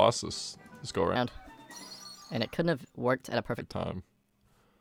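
A section at the wrong speed runs from 1.16 s to 3.60 s in this short audio. Through that stretch playback runs at 1.28 times the original rate, so everything is both hurried and raised by about four semitones, since speed and pitch shift together. The jump in and out is abrupt at each boundary. The likely cause is that segment being resampled or played against a mismatched clock during editing or playback.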